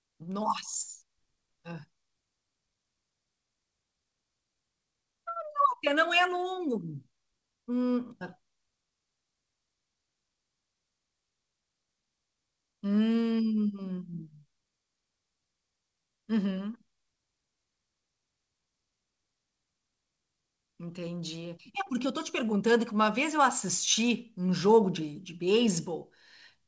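No technical faults are audible.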